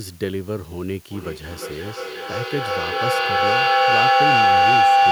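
A speech recording with two problems. First, there's low bit depth with dither the whole way through. The audio sounds like it's been cut down to about 7 bits, with dither added before rounding, so the quantisation error comes out as a steady, even hiss about 20 dB below the speech rather than as distortion. Second, a feedback howl kicks in at 1.11 s and runs to the end. It's the classic case of two devices in the same room on one call: the mic-to-speaker loop gains level on every pass, so the repeats grow and narrow to a tone of around 700 Hz. It pulses roughly every 400 ms, which fits the loop delay, and peaks about 12 dB above the speech.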